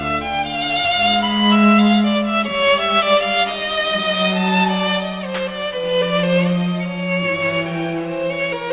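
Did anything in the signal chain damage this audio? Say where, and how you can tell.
Yes, aliasing at the sample-rate conversion stage, unfiltered and consistent with a drop to 8 kHz, folds content above 4 kHz into metallic, unrelated tones, roughly 20 dB below the music throughout.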